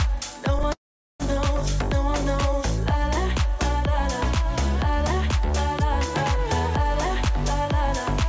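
At 0.73 s the sound stalls until 1.23 s. This is a call audio freeze. A brief fading buzz, then about 0.42 s of silence. Packets were likely delayed, emptying the jitter buffer. Nothing is lost; the audio resumes about 0.47 s late. The sound above 8 kHz is absent, which fits G.722.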